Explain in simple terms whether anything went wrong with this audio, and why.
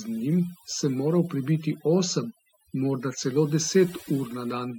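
Something did go wrong: there's overdone noise removal running through the whole recording. A noise reduction tool was pushed too hard, so it kept shutting off slices of the sound it took for background noise, and it grabbed the softer parts of the speech too. That's why the gaps between phrases drop to an odd near silence with little twinkling specks.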